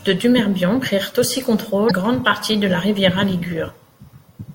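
At 1.87 s, right after "prirent aussi", the speech is broken by damaged data in a compressed stream lasting about 40 ms, to 1.91 s. Some of the encoded bytes at that point are corrupt, so the decoder cannot read those frames properly, loses its place in the stream and has to search for the next valid frame header. The result is a short chirp, squawk, click or hole before normal decoding resumes at "grande partie de la".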